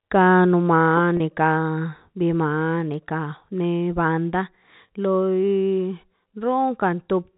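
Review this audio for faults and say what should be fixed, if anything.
Packet loss with pitch repetition at 1.17–1.20 s, just after "ka no". A 30 ms gap, consistent with a single lost packet in the G.711 telephone-band stream, was bridged by repeating the last pitch period. It is heard as a briefly held, buzzy sound. To prevent it, add forward error correction or packet redundancy, and a suitably sized jitter buffer on the network path.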